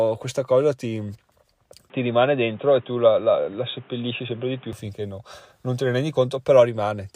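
A speech clip. From 1.9 s to 4.73 s the sound turns dull and boxy, with nothing above 3.8 kHz. A new background noise sits roughly 30 dB below the speech. The level stays about the same, and there is no gap at either switch. The change comes just before "finché no non te". The likely cause is the input switched to a poorer device, such as another microphone or a headset's call profile, and then back.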